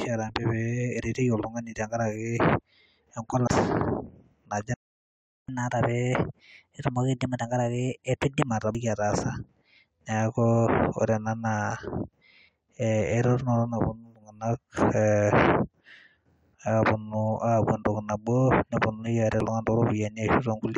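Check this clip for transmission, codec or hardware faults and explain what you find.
Three kinds of fault are audible in the speech.

Damaged data in a compressed stream occurs at 3.47 s, 8.75 s and 19.40 s. Corrupted bytes make the decoder misread frames, lose sync and hunt for the next frame header, so each point gives a brief chirp or blip.

A playback stall runs from 4.74 s to 5.48 s, a silence of about 0.74 s in mid-flow. The player most likely ran short of data or had its thread blocked, so output stopped until it recovered.

Catch-up at higher speed follows from 5.48 s to 8.48 s. The player resamples its backlog at 1.1 times normal speed to recover some of the lost time, so the speech sounds hurried and raised by roughly one and a half semitones before returning to normal.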